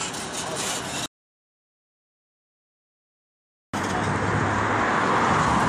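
A short piece of audio falls into an audio dropout to silence at 1.06 s and stays there until 3.74 s, so about 2.68 s of material is simply gone. The cut is abrupt at both ends, and the gap holds silence with no room tone or hiss, which sets it apart from a natural pause or a noise gate closing. The likely cause is an input lost while recording continued, writing silence.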